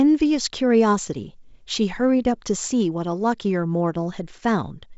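No technical faults are audible.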